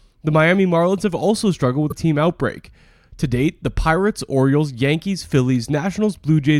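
At 1.90 s the speech skips ahead with a brief disturbance, about one 26 ms frame long, likely a broken MP3 bit reservoir after missing frames.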